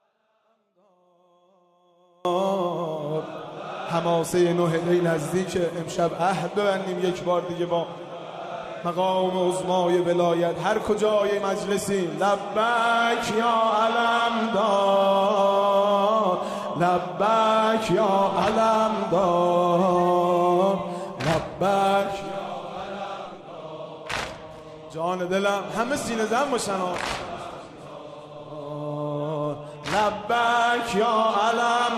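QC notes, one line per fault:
0.00–2.25 s: audio dropout to a faint residue from the outset, just a faint leak far below normal level until an abrupt return, likely signal lost upstream.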